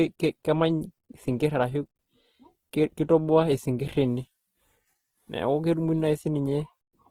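From start to finish the speech carries plainly audible codec damage, likely from Opus compression in its music (CELT) mode. The damage fits a low bitrate, around 16 kbps. The full bandwidth stays in place. Starved of bits, the encoder keeps each band's energy but fills the detail with folded copies of lower bands or noise. So there is little swirling. Instead, tonal parts turn rough, grainy and noisy, giving the voice a coarse, hashy texture.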